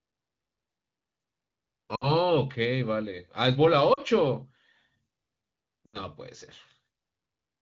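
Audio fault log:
1.96–2.11, 3.93–4.00, 5.86–5.99 s: lost AMR speech frames. Brief smeared dips of roughly 60, 40 and 80 ms where the decoder stretched the last good sound and faded it.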